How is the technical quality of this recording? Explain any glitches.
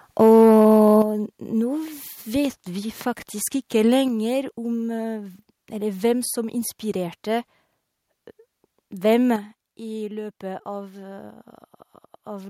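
The recording is degraded by overload at the start and then by the level dropping abruptly three times.

Microphone overload, from 0.2 to 1.02 s: the peaks push about 2 dB past the converter's limit, and about 7% of the samples get their tops sheared flat. That flattening adds harsh, crackly harmonics to the loudest syllables, giving them a gritty, splintered edge. The likely cause is the microphone's input volume being set too high, so the converter ran out of headroom.

Microphone volume stepped down, at 1.02, 4.08 and 9.36 s: the voice and the background noise fall together in one sudden step, by about 8 dB, then about 4 dB, then about 6 dB. The first drop comes right as the distortion ends. This pattern likely comes from the call software's automatic gain control detecting an overly hot signal and cutting the device's input volume, leaving audible jumps in loudness.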